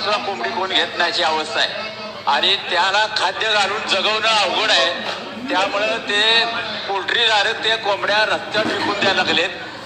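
No technical faults can be heard anywhere in this recording.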